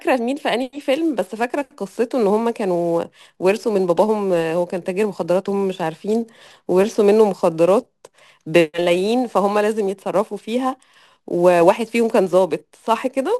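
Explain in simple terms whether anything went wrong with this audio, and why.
From about 0.93 s to the end, there's sample clock jitter: the converter's timing wobbles by something like ten millionths of a second, so each sample lands slightly off. That adds a gritty hiss to the speech, strongest on loud and bright sounds and gone in the pauses.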